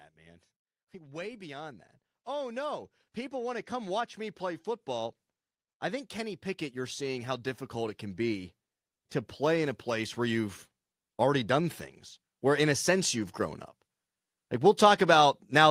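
A speech recording in which the automatic gain control twice judged the input too quiet and pushed its gain upward. From 0.16 to 5.2 s the level climbs by about 9 dB, and from 9.37 to 11.8 s by a further 4 dB or so. Because the gain is applied to the whole signal, the voice and the background noise swell together, a slow ramp in loudness rather than a jump.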